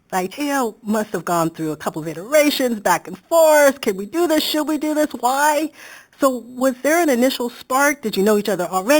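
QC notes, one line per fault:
Throughout, imaging from sample-and-hold upsampling: samples are repeated without a smoothing filter, which fits 8 kHz audio raised to 48 kHz, leaving a mirror-image copy of the speech between 4 and 8 kHz, about 14 dB down, heard as metallic fizz tracking the speech.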